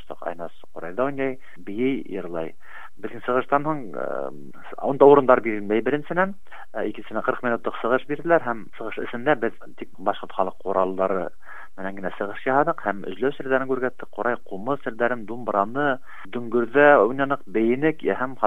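Nothing stands out here; the sound carries on without a single dropout, glitch or distortion worth pointing to.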